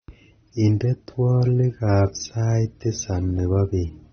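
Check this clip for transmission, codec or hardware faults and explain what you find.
One codec fault runs through the whole speech clip: AAC compression damage, plainly audible from start to finish. Nothing reaches above 6.3 kHz, and the sound is dull with a smeared, warbling fizz on sibilants, which fits a low AAC-LC bitrate of roughly 27 kbps as the likely cause. The coder starves its frequency lines of bits, cutting the top and blurring detail. A simple low-pass filter would also dull the sound, but it would leave no warble.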